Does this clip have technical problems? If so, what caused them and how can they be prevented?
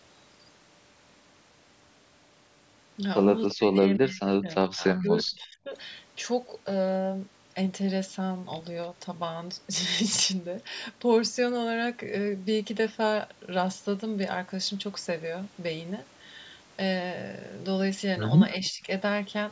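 Yes. At 3.50 to 3.55 s a brief, faint delayed copy of the sound appears, roughly 20 dB below the speech and trailing by 341 ms. This is likely an echo leak: the far end's loudspeaker output reached its microphone and slipped past the echo canceller. Using a headset or better acoustic echo cancellation on the loudspeaker side would prevent it.

From 3.54 to 5.72 s the speech sinks steeply, by as much as 40 dB at its deepest, and dips again from 18.58 to 18.87 s by roughly 25 dB. The likely cause is speech suppressed in double talk: with both sides talking, the echo canceller treated the talker as echo and turned them down. Headsets, or an echo canceller with better double-talk handling, would keep the talker from being suppressed.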